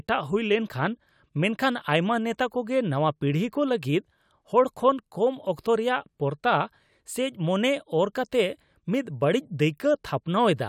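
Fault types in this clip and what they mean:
Listening through the speech, nothing stood out as a technical problem at any point.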